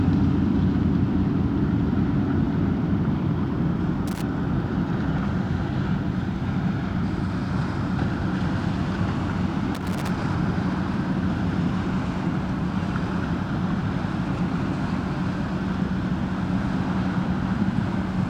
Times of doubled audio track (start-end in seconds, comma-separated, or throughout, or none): none